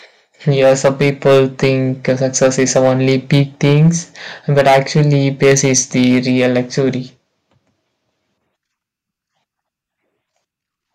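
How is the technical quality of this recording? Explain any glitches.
The recording suffers from hard clipping in three stretches of the speech. It runs from 0.48 to 1.72 s, from 2.09 to 3.89 s, and from 4.57 to 6.81 s. The level is driven past what a stage in the chain can pass, by about 7 dB, about 6 dB and about 11 dB. Peaks are cut flat, adding harsh upper harmonics. Loud syllables crackle and fuzz. The third stretch sounds roughest.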